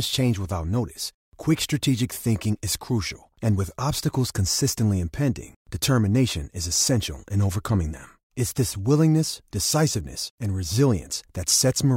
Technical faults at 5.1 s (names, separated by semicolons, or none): none